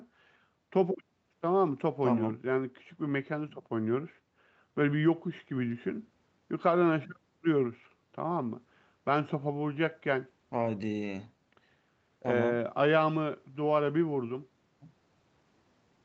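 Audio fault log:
No faults can be heard in this speech recording. The sound stops at about 8 kHz, which fits normal microphone processing and an Opus call path at around 32 kbps.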